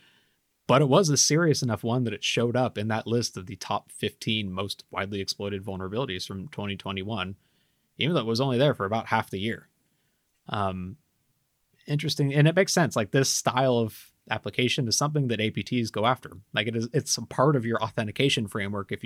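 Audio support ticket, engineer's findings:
No audible faults found in this speech clip.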